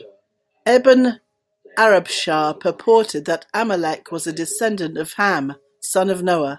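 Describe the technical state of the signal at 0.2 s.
At 0.2 s the speech signal is intact, with no audible fault at that moment.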